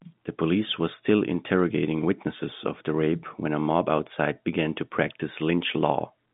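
No faults to report in the speech: it sits on G.711 telephone coding, band running from 150 Hz to 3.6 kHz with nothing above 3.8 kHz, as expected for that format.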